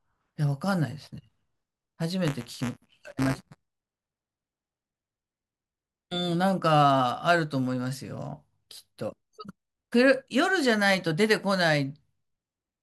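From 2.27 to 4.85 s a robotic 188 Hz buzz rides on the speech, present only while there is signal. This is buffer tearing: the writing program and the hardware reader have slipped, so a small slice of each period, which fits a 256-sample buffer, holds audio roughly 10 ms old between hard joins.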